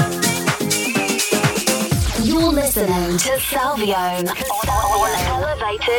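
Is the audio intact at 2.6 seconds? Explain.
Yes, the audio is intact at 2.6 seconds, with no dropout, click, distortion or other fault audible at that point.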